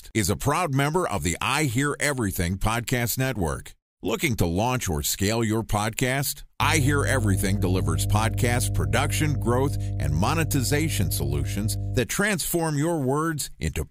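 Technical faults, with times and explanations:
6.62–12.00 s, mains hum: just after "or scale your podcast", a steady 50 Hz tone with low harmonics, roughly as loud as the speech, from power-line coupling such as a ground loop.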